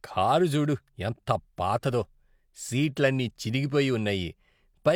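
No technical faults are audible anywhere in it.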